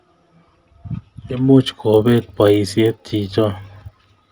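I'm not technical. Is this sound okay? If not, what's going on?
No. From about 1.66 s until the end, a steady buzz rides along under the speech, present only while sound is playing. It's a resampler restarted on every block. The audio was converted to a higher sample rate, likely doubled, in 20 ms chunks, each handled as if it stood alone. Every chunk edge gets a tiny glitch, and 50 glitches a second blur together into that buzz.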